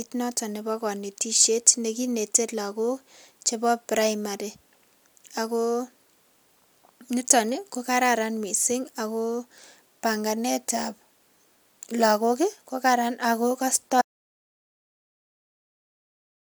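A speech recording in which the input was likely lost at 14.02 s, an audio dropout to silence: right after "lakok kokaran ako" the sound cuts to silence, with no room tone, and stays silent to the end.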